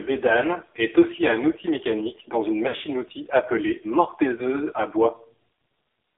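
Throughout, the speech carries heavy AMR narrowband mobile codec damage: band-limited to about 300 Hz–3.5 kHz, buzzy and synthetic, consistent with roughly 5.9 kbps coding. Lost AMR speech frames follow. At 1.16–1.19 s, after "bédane est", a brief warble fits one concealed 20 ms frame. At 2.68–2.84 s, after "outil mécanique dans une", scattered losses smear and fade the sound. At 4.36–4.43 s, another short dip follows a single concealed frame.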